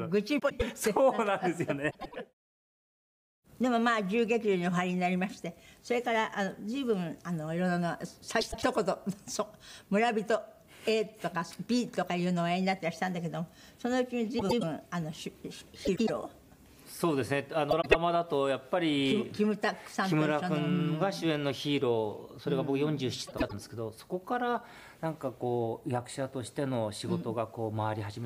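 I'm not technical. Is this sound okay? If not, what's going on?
No. Seven times a short moment sounds garbled, like a quick stutter or flutter: at 0.39, 1.90, 8.41, 14.39, 15.85, 17.71 and 23.27 seconds, each lasting about a quarter of a second. The problem is frames out of order. Two neighbouring chunks of audio, each about a tenth of a second long, were played in swapped order. Nothing is actually missing.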